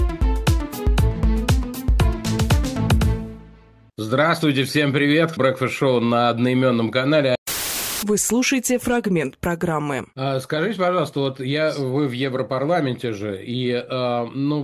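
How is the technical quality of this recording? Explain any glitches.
The technical quality of this recording is sound, with no glitches to explain.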